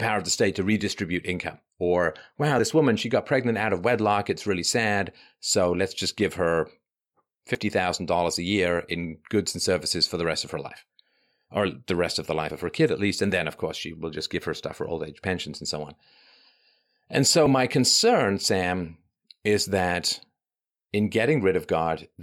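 Short skips interrupt the speech at 2.59, 7.55, 12.51 and 17.46 s, spaced almost exactly 5 s apart. At each one a sliver of about 40 ms vanishes and the sound on either side butts together with no gap of silence, so the flow jumps forward abruptly. This is audio missing between chunks: the recording was likely processed in 5-second blocks, dropping a small piece at every handover from one block to the next.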